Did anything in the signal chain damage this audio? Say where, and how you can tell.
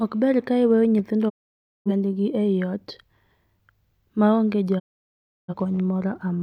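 Yes. The damage came at the digital broadcast reception stage, where the receiver suffered a digital broadcast dropout. It lost valid frames and muted, with a quick fade of about 20 ms, at 1.28 to 1.91 s, just after "ber ka iweyo nyithindo" and resuming at "ei ot", and again at 4.78 to 5.54 s, just after "ma onge". Roughly 0.55 s and 0.68 s of programme are gone rather than delayed, so the speech jumps ahead on return.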